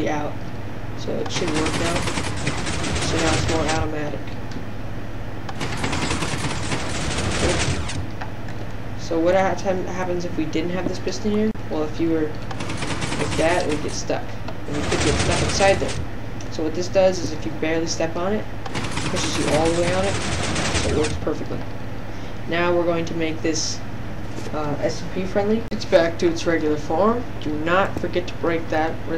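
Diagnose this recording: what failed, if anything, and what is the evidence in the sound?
Hard clipping at 25.95 to 25.97 s, a brief crackle on a peak. The signal there is driven about 3 dB past what the converter or a fixed-point sample-format stage can hold, so the waveform tops are cut flat, adding high-frequency harmonics heard as a sharp tick.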